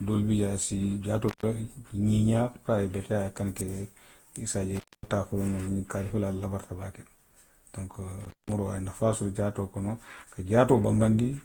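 Throughout, the speech is swirly, smeared and hollow, with blurred consonant attacks, more degraded than its bandwidth up to 20.1 kHz would suggest. This is likely generation loss: around five successive Opus encodes near 48 kbit/s, each requantising on a shifted frame grid.

Three dropouts come from an intermittent contact, a connection briefly opening. The sound cuts with crackle at each edge, leaving faint hiss, at 1.28–1.43 s (open about 124 ms), 4.75–5.08 s (about 237 ms) and 8.21–8.52 s (about 187 ms).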